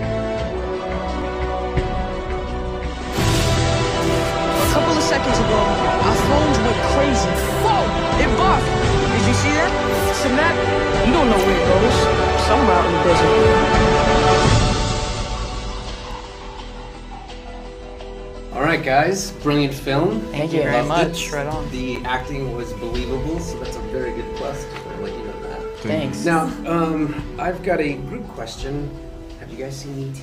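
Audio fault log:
16.11 s and 21.96 s, block of digital silence: the audio cuts out and back with no fade, about 2 ms then 9.6 ms, so each is heard as a tick or dip rather than as silence.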